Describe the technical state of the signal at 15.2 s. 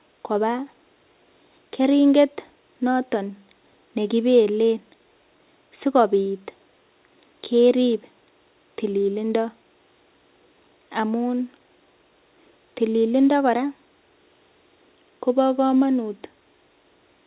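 At 15.2 s the speech is intact, with no dropout, glitch or distortion, only the narrow telephone bandwidth of the call path, where nothing is heard above 4 kHz, which fits a G.711 A-law codec at 64 kbps.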